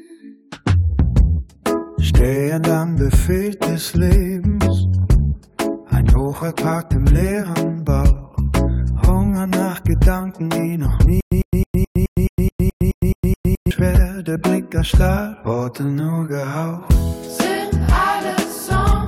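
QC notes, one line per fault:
11.21–13.71 s, stutter with silent gaps: a burst of about 102 ms repeats 11 times, each followed by about 111 ms of dead digital silence, giving a steady 213 ms cycle. The likely cause is a stalled player or stream replaying its last fragment at each retry, then running dry. The identical repeated burst and the regular, fully silent gaps set it apart from random dropouts or a gapless loop, and the audio due in that span never arrives.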